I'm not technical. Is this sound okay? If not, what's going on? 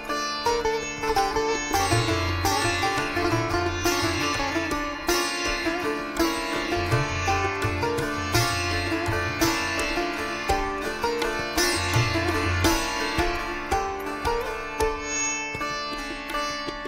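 Yes, nothing in this sound stood out as a problem when I listened to it.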